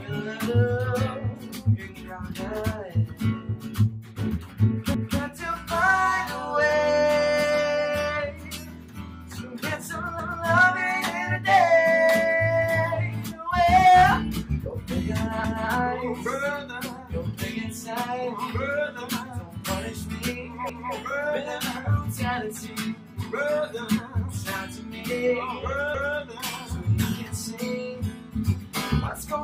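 Overlapping chunks: the audio was cut into 5-second chunks, each starting 250 ms before the previous one ended. That quarter-second plays twice at every join, giving a stutter at 4.94, 10.19, 15.44, 20.69 and 25.94 s.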